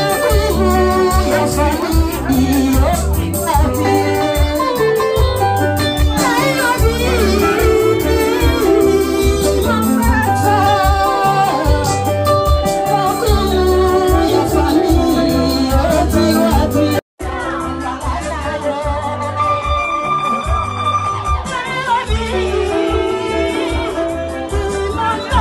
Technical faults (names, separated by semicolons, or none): bit error spike